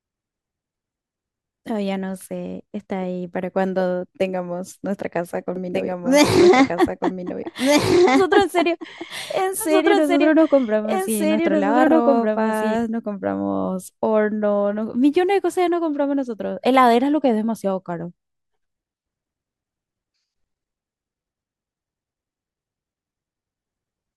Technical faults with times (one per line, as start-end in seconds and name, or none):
5.56-12.76 doubled audio track